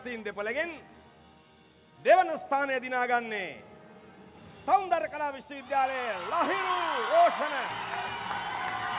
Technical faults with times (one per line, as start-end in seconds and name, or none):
none